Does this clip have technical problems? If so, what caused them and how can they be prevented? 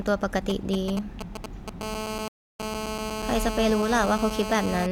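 Yes. GSM signalling bursts from 0.5 to 1.7 s: a nearby 2G phone's short radio bursts, pulsed at 217 Hz, are rectified by the audio circuitry into a galloping pattern of brief buzzes a little below the speech. Keeping phones well away from microphones and cables prevents this.

GSM phone buzz from 1.81 to 4.87 s: the same phone, now in a call, transmits in bursts 217 times a second, and rectification turns this into a steady, raspy, harmonic-rich buzz about 5 dB below the speech. Switching phones off or to flight mode prevents it.

Rebuffering stall from 2.28 to 2.60 s: the player exhausted its downloaded audio and paused, so the speech drops to silence for about 0.32 s and then resumes exactly where it stopped, adding time without losing anything. A larger playback buffer or a steadier connection prevents it.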